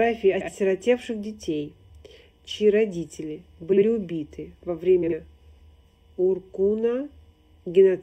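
Throughout the clip, channel delay causes comb filtering. One channel lags the other by roughly 0.4 ms, and summing to mono cancels shared content at evenly spaced frequencies. The first notch sits near 1.5 kHz, giving a steady hollow, phasey colouring.

Frames out of order occur at 0.33–0.49 s, 3.72–3.83 s and 5.02–5.12 s. In each, two adjacent blocks play swapped, about 70 ms each in the first stretch (consistent with three-frame runs) and about 46 ms each in the others, producing a garbled flutter and no lost time.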